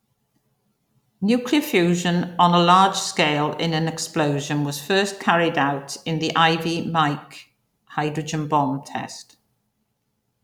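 No technical faults are audible.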